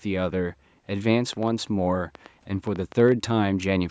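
A train of clicks runs from 1.33 to 3.13 s in this speech clip: about ten similar pulses at an irregular 5.6 per second, peaking about 5 dB above the signal, likely from electrical interference or a faulty connection. The call microphone processing limits the audio to nothing above 8 kHz.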